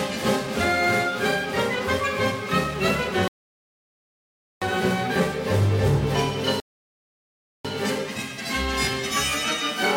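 At 3.28 s the sound drops to silence until 4.62 s, then picks up exactly where it stopped; the same happens from 6.60 to 7.65 s. These are rebuffering stalls: playback ran out of downloaded audio and waited, adding about 1.34 s and 1.05 s.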